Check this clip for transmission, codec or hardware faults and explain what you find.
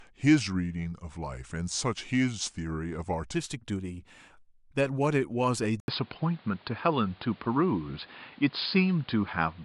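Two faults turn up in this speech clip.

From 0.0 to 3.35 s there's a section at the wrong speed: playback runs at 0.889x, about two semitones low, so the voice sounds deep and dragged, likely from being fitted to the wrong clock.

At 5.80 s the input is switched to a poorer device, likely a different mic or headset profile. After an 80 ms gap, the band narrows, the level shifts by around 5 dB, and a noise floor about 30 dB down leaves it dull and boxy to the end.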